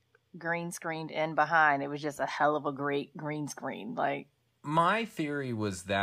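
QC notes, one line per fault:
No technical faults are audible anywhere in the recording.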